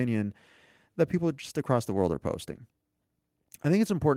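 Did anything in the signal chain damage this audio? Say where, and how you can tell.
No, nothing in the signal chain has audibly damaged this speech recording; the signal stays continuous and stable throughout, with no stage leaving a mark on it.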